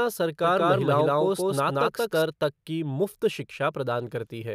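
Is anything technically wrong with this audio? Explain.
Yes. A doubled audio track runs from 0.44 s to 2.22 s, ending just before "तक की". During that stretch a second copy of the speech sits roughly a fifth of a second behind the first, at about the same loudness, so every syllable is heard twice. The copy is dry and full-band, with no decay or room colour, and it cuts in and out abruptly. It is likely the same signal reaching the mix twice, once through a slower path.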